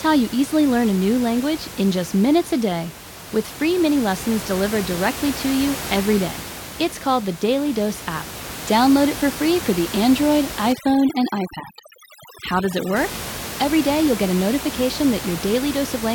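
From about 10.73 to 12.96 s you get overdone noise removal: a noise reducer set far too hard. It pulls individual frequency bands right down whenever they sit near its noise estimate, so the room noise, which runs only about 12 dB under the speech, drops and breaks up into little twinkling, warbling specks. The quieter parts of the speech get pulled down with it.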